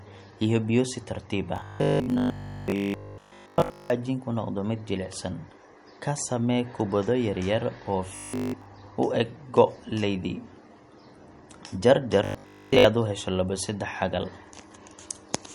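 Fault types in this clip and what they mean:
MP3 compression: Throughout the speech there is a plainly audible watery, swirling texture, with s sounds turning chirpy and consonant attacks smeared. Weak spectral detail flickering from frame to frame points to a likely low-bitrate MP3 encode, consistent with about 48 kbps. A plain low-pass filter would only dull the top end, with no swirl or smearing.
Robotic sound from repeated short buffers: From 1.56 to 3.9 s, between "iyo biyo si tartiib" and "noqdo mid jilicsan", the voice becomes a rigid metallic buzz at 50 Hz. Shorter bursts follow at 8.16 to 8.66 s, between "samee kubbado yaryar oo" and "u eg go’ leydi", and at 12.25 to 12.85 s. The likely cause is one 20 ms chunk repeated in place of fresh audio, fully in the first stretch and about 70% in the later two. Unlike the codec swirl, this imposes a fixed pitch and comes only in bursts.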